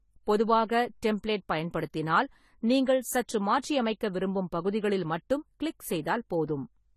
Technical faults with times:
0.00-6.96 transcoding between lossy codecs

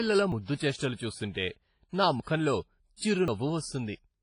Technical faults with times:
0.00-4.23 WMA compression
0.32 dropped buffer (overrun)
2.20 dropped buffer (overrun)
2.96-3.01 pre-echo
3.28 dropped buffer (overrun)

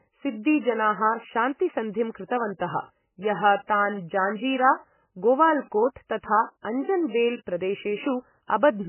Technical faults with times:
0.00-8.88 MP3 compression

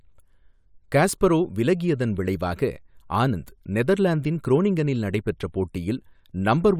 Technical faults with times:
none

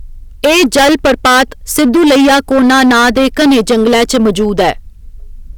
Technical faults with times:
0.00-5.58 hard clipping

